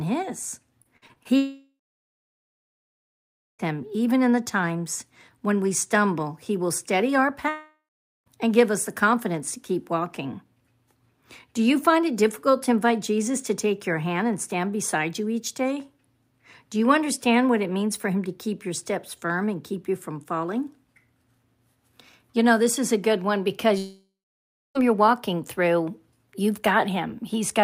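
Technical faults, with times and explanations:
0.83–1.27 s, repeated packet loss (robotic sound): The speech turns choppy here. There are five short holes, the longest about 49 ms, and each one gets patched by stretching the previous sound. About a quarter of this half-second is that stand-in audio rather than real speech. Because the patches come so close together, you hear a choppy, stuttering sound instead of clean gaps.
1.37–3.61 s, 7.49–8.28 s, 23.78–24.77 s, long network dropout: Each time, the last bit of speech smears into a fading buzz or hiss and then goes quiet. The silences last about 1.85 s, 0.47 s and 0.66 s. Speech picks up again later with the gap simply gone, roughly 2.2 s, 0.78 s and 0.98 s of audio lost. That fits a likely network outage where nothing arrived and the receiver could only extend the last sound briefly.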